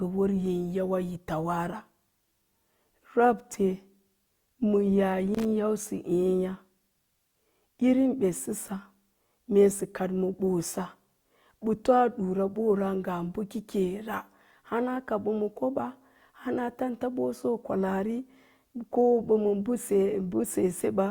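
Loose connector crackle appears from 5.35 to 5.45 s in this speech recording: a worn or dirty contact keeps making and breaking as it shifts, chopping the signal on and off for about a tenth of a second and producing a short, irregular burst of scratchy crackle.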